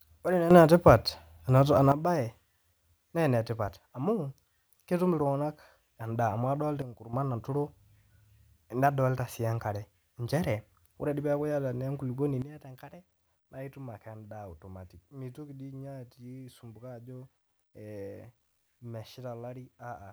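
Speech, with sudden gain jumps. Level and background noise step up about 10 dB at 0.51–1.92 s, down about 10 dB at 6.82–7.13 s, and down about 12 dB from 12.42 s to the end. The likely cause is a gain change applied without a ramp.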